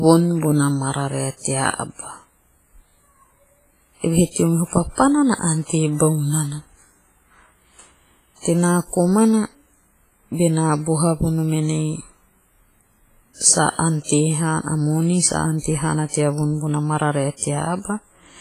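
Throughout the speech there is a ringing, washy quality, with a hiss that swells and fades with the signal and nothing above 15.3 kHz. The damage is heavy and is likely WMA compression at a low bitrate, around 24 kbps, zeroing weak components.

Pre-echo appears at 4.31, 14.04, 16.09 and 17.37 s: a brief hiss of about 51 to 57 ms runs ahead of a sharp attack, which sounds softened. The transform codec spread noise sized for the loud onset across the quiet moment before it.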